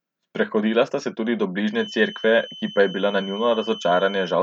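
From 1.68 s to the end of the speech, a thin, steady feedback whistle at 3 kHz sits roughly 15 dB below the signal. It swells and fades slowly in level. The likely cause is a loudspeaker-to-microphone loop held just at the edge of feedback. On a spectrogram it shows as one unbroken horizontal line.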